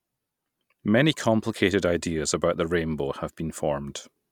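Nothing in this speech recording needs flagging, as no technical faults turn up anywhere along it.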